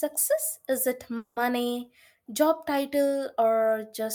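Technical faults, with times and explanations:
1.17–1.38 s, call audio freeze: the last bit of speech gets stretched into a tail that fades out over about 190 ms instead of dropping to silence. Then the speech picks up exactly where it stopped, so nothing's lost, but everything after lands about 190 ms later than it would have. That's the likely cause: packets stalled in transit, the jitter buffer ran dry, and the receiver filled the gap until they turned up.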